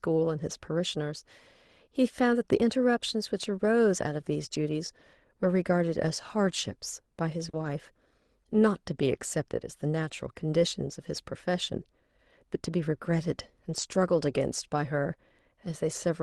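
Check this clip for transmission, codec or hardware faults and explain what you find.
Two kinds of network fault appear in this speech, both on an Opus call path whose audio tops out around 12 kHz.

Lost packet rebuilt from error correction, at 4.71–4.73 s, 7.53–7.67 s and 13.69–13.83 s: the decoder substituted low-bitrate copies of the missing audio, so there is no gap, but those stretches sound rougher and noisier.

Short concealed packet loss, at 7.49–7.55 s: about 40 ms never arrived, and the receiver extended the preceding sound, heard as a brief smear just before the rougher rebuilt stretch.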